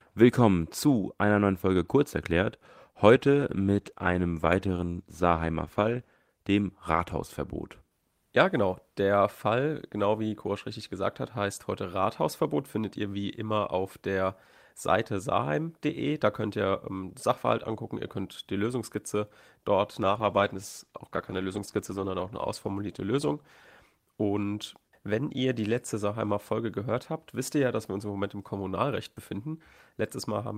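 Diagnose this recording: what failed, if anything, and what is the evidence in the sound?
A call bitrate drop at the codec stage: the bandwidth estimate fell and the encoder coded more coarsely. From 3.15 to 6.23 s and 20.01 to 25.37 s the speech turns rough and muffled, highs cut, worst for 3.0 s and 2.1 s, which fits 40 kbps falling to about 16 and 14 kbps.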